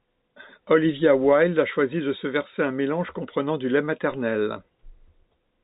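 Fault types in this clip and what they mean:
Nothing in this speech clip stands out as a fault, so there's nothing to list here.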